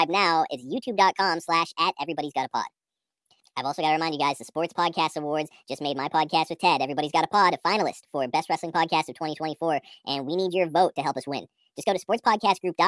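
From start to finish the speech sounds high and hurried, running about 1.5 times too fast with every pitch raised by roughly 7 semitones, close to a musical fifth. This is a wrong sample rate fault: the samples are played out faster than they were captured, with no conversion between the two rates, so timing and pitch shift together by the same ratio. A 3:2 ratio fits audio recorded at 16 kHz and played at 24 kHz.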